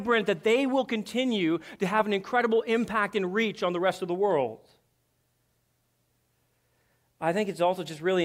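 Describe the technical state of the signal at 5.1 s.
At 5.1 s the speech signal is intact, with no technical fault present at that moment.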